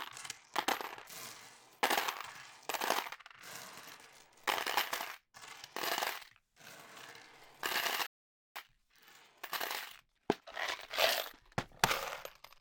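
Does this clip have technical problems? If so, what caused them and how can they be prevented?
Yes. There's a playback stall from 8.07 to 8.56 s, where the sound drops out for about half a second, most likely because the player ran dry or its thread got blocked. A bigger playback buffer and keeping the audio thread free of other work would prevent that.

Right after, from 8.56 to 11.56 s, there's time-compressed catch-up: the player trims its backlog by running about 1.15 times fast at normal pitch. Letting it resume without squeezing, or catching up more gently, would avoid the hurried stretch.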